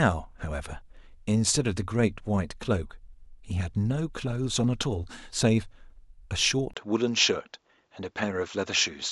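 A speech clip where, at 6.74 s, a 20 ms gap is followed by a duller sound to the end, with nothing above 7.6 kHz, a faint new noise floor and the level unchanged. The input likely switched to a poorer device mid-recording.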